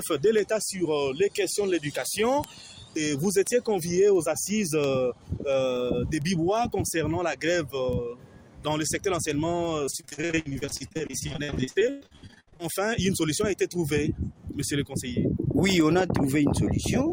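From 0.39 s to the end, word clock ticks recur roughly every third of a second: a receiver running on its own clock drifts against the sender by around 70 ppm, slipping one sample at each crossing. A waveform shows single-sample spikes; a spectrogram, thin vertical broadband lines.

Between 9.85 s and 12.62 s, repeated packet loss makes the sound choppy and robotic. Dozens of holes, the longest 111 ms, are patched by stretching the preceding sound, so nearly half that stretch is filler. A spectrogram shows frozen, repeated bands broken by abrupt seams.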